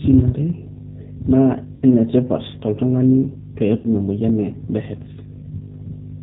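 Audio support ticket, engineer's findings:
G.729 codec, whole clip. Speech band-limited, nothing above 4 kHz, with a rough, slightly synthetic texture consistent with an 8 kbit/s G.729A path. Rebuilt from a vocal tract filter, pitch predictor and sparse pulses per 10 ms frame. Spectrogram shows a hard empty band above 4 kHz and smeared, blocky harmonics. Waveform looks normal in level.

VoIP packet loss concealed by the speech codec, 1.76–1.83 s, just before "enetipat toltungani", and 3.78–3.87 s, just before "emoyian e". About 60 ms lost each time, which fits two lost packets. Decoder extends its last pitch and filter with gain stepping down, giving a buzzy tone or coloured noise that fades. Spectrogram shows stretched, smeared content and waveform a decaying envelope, with weak recovery after.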